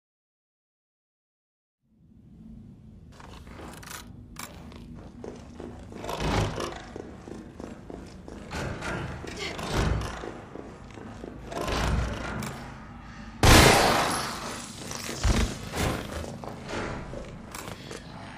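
At 4.95 s there is a brief burst of damaged data in a compressed stream. It lasts under 20 ms. Part of the encoded data there was corrupted or lost. The decoder could not read those frames properly and had to find its place again at the next valid frame header. The result is a short glitch in the sound, heard as a chirp, squawk, click or gap. The same fault returns at 9.71 s, again under 20 ms.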